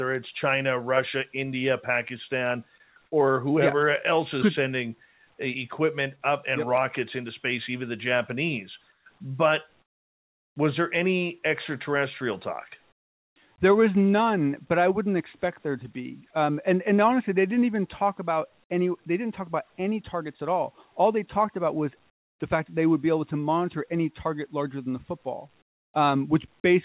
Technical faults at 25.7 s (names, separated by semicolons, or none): comfort noise in place of the background